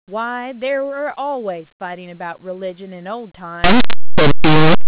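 Speech that from 3.64 s to the end turns into very loud, harsh distortion: linear audio read as companded, with plain 8-bit samples expanded as mu-law codes.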